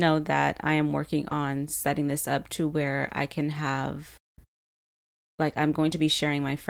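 Short concealed packet loss at 1.29 to 1.33 s: about 20 ms of the call arrived too late to decode, and the receiver covered roughly 12 ms of that gap by extending the preceding sound before blending back. The result is a brief smear or wobble in the speech.

Lost packet rebuilt from error correction at 1.31 to 1.33 s, 3.05 to 3.11 s and 5.49 to 5.55 s: the decoder played low-bitrate copies carried in following packets, so there is no gap. The 20 ms and 40 ms stretches sound rougher and noisier.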